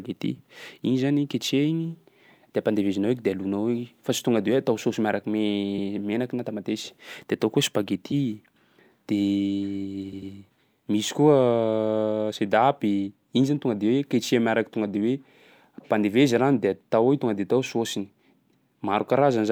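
At about 5.77 s the speech stutters once: a 72 ms slice plays again, which fits a short run of compressed frames being written or sent twice, so these are repeated frames. At 10.12 s a 96 ms block plays two extra times, a triple stutter that adds about 192 ms. Each repeat jumps back, and the clip ends up longer by the repeated time.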